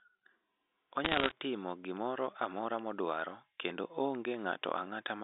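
From about 1.05 to 1.32 s there's a burst of bit errors on a digital phone line: roughly one bit in a hundred flipped, so scattered samples jump and crackle sharply over the speech.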